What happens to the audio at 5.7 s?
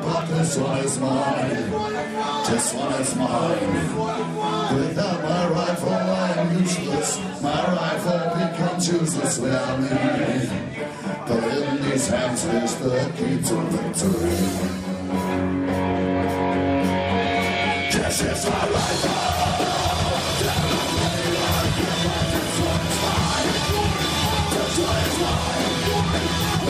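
Nothing goes wrong at 5.7 s; the audio plays through that moment intact, with no dropout, click, distortion or other fault.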